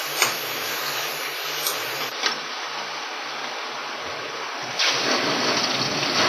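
From the start to the end, the sound carries heavy transform-codec damage, most likely WMA compression at a low rate, consistent with around 24 kbps. Quantisation noise is smeared over long blocks, so transients ring and textures turn washy, with a hiss that rises and falls with the signal. Weak spectral detail has been discarded, and nothing remains above 15.2 kHz.

At 2.1 s there is a gap of about 20 ms, after which the character of the recording changes through to the end. This points to an input switched to a poorer device, likely another microphone or a headset call profile. The bandwidth collapses to nothing above 6.1 kHz, so the sound turns dull and boxy. The level drops by about 5 dB, and a new noise floor appears roughly 50 dB below the signal.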